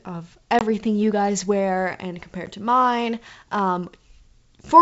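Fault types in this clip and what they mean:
Packet loss on an ADPCM call: A couple of packets drop out near 0.59 s, leaving a 20 ms silent hole, and a single packet goes at about 2.46 s, a 10 ms hole. Each gap cuts in and out with hard edges. The receiving decoder's predictor and step size lose track of the sender's, so the speech comes back with a bit of grit before it catches up over a few tens of milliseconds.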